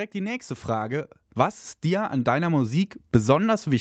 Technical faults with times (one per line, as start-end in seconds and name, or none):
0.12-1.22 automatic gain rising
1.82-2.86 automatic gain rising